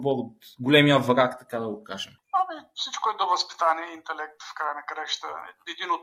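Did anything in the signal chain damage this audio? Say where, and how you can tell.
Yes. The adaptive stream started at a low bitrate at the network and playback stage. From 0.0 to 2.0 s the treble is thin or synthetic, with heavier codec artefacts, which fits a low-bitrate HE-AAC version. At 2.0 s the sound steps up, with no gap, to what points to roughly 96 kbit/s AAC-LC. On a spectrogram the upper band fills out abruptly at that point, and nothing appears above 14.9 kHz.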